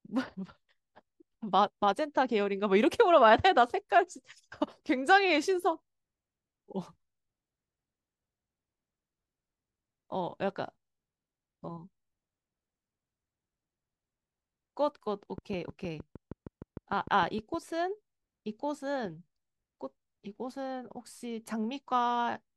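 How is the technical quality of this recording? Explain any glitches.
There's one clear glitch in this speech recording, a train of clicks from 15.38 to 17.55 s. For a bit over two seconds you get a steady ticking at about 6.5 clicks per second, evenly spaced, around fifteen of them in all, each peaking at roughly the level of the speech itself. Something is injecting a short, near-identical pulse on a fixed cycle, most likely interference from nearby equipment or a faulty connection or power supply, so it pops right over the sound and through any pauses.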